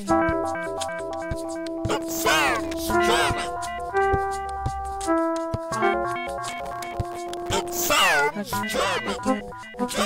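From 1.94 to 2.79 s, and again from 6.45 to 7.86 s, the sound breaks into processor overload crackle. The processor keeps missing its deadlines for very short buffers, around 1.5 ms each, and every miss leaves a hard-edged hole of silence, dozens of them in a row. On a waveform these show as many tiny flat dropouts cutting the signal. A spectrogram shows thin vertical broadband streaks until each burst stops.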